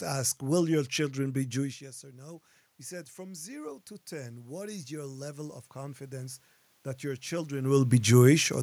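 From 3.15 s to 6.46 s there is an automatic gain rise. The input had fallen by about 17 dB, so the gain control slowly raised its gain by about 8 dB over roughly three seconds. The speech and the room noise swell up together. That shared swell is what separates it from the talker moving, heard around 1.5 s and 7.5 s, where only the speech level shifts and the room noise holds steady.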